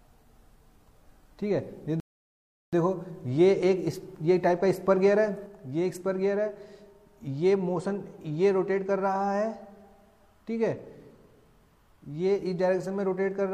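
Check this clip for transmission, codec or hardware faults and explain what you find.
Two faults are audible: a playback stall and an abrupt level drop.

At 2.00 s a rebuffering stall cuts the sound to silence until 2.73 s. The player ran dry of downloaded audio and waited for more. Playback then resumes exactly where it stopped. Nothing is missing, but about 0.73 s is added.

At 5.46 s there is a sudden gain jump. The level falls by about 4 dB in a single step and stays lower to the end. The sound and the background noise drop together. The likely cause is a digital gain change applied without a ramp.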